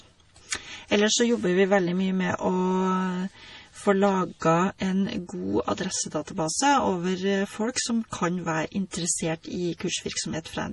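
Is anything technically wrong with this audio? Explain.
Yes. Throughout, the speech sounds watery and swirly, with nothing above 11.5 kHz, pointing to heavy MP3 compression at a bitrate likely near 32 kbps, zeroing weak frequency lines. From 8.91 to 8.93 s, a short hiss runs about 21 ms ahead of an attack. That is pre-echo, where block-spread quantisation noise leaks before the onset.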